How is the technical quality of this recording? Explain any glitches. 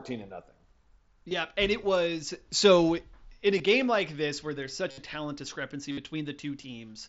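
The speech comes through a Bluetooth headset link, band-limited to about 8 kHz with mild mSBC graininess on louder sounds, and four brief gaps were filled by concealed Bluetooth headset packet loss: 1.29–1.31 s, 3.58 s, 4.91–4.98 s and 5.91–5.98 s. When packets from the headset went missing, the phone repeated the best-matching recent stretch of waveform. The losses at 1.29 s and 3.58 s are short, about 23 ms and 15 ms. The longer ones, about 68 ms and 60 ms, become a held, buzzy tone at full level with a slight warble as real speech resumes. Unlike a plain dropout, the level never falls to silence.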